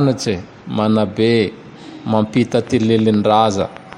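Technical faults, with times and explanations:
2.37–3.94 s, train of clicks: about ten sharp pulses at a steady 6.4 per second, each much the same shape and peaking about 5 dB above the speech, so they tick audibly over the talking and through the gaps. The even spacing and repeated shape point to a periodic disturbance entering the signal path, likely interference from nearby equipment or a faulty connection or power supply, rather than anything in the recorded scene.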